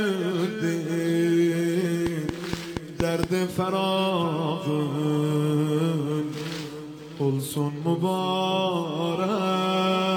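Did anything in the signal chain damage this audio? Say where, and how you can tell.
Yes. A train of clicks, most likely interference coupling into the analogue wiring or a faulty connection or power supply, injects pulses of much the same shape from 2.07 to 3.24 s. About seven clicks arrive at a regular 4.3 per second, peaking about 15 dB above the signal, and are heard as ticking over the sound.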